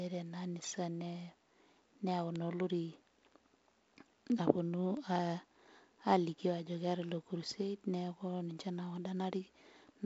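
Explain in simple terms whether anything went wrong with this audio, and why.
Three sharp little ticks cut through the speech, at 2.36, 4.97 and 7.09 seconds. Each is a bit error spike: a single digital bit flipped, making two or three samples suddenly jump and snap back, so you hear a click unrelated to the speech, heard through its wideband telephone-style G.722 coding.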